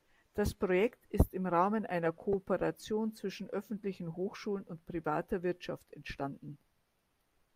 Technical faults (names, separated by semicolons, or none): corrupt frame decoded